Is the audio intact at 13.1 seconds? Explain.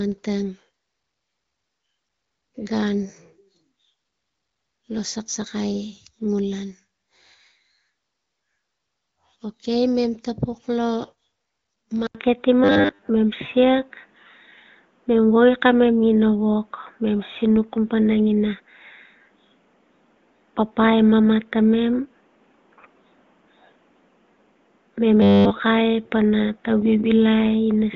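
No. At 13.1 seconds the sound is still affected by an input switched to a poorer device, which began at 12.07 s and lasts to the end. The sound likely changed input to a narrower device. An 80 ms silence marks the switch. After it, the band narrows from the 7.1 kHz the wideband path reached before. The tone turns dull and boxy. The level shifts by roughly 5 dB, and a new noise floor sits roughly 40 dB under the signal.

The moment also falls right at the tail of robotic sound from repeated short buffers, which runs from 12.64 to 13.08 s. Audio likely arrived too seldom, so a 10 ms stretch was looped to fill the gaps. Most of the real audio in that span was skipped. The looping forces a rigid 100 Hz metallic buzz that only loosely tracks the sound.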